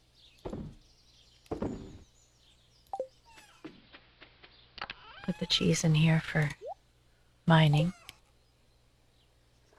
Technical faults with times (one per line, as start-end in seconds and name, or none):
3.37-5.65 digital radio blending to analogue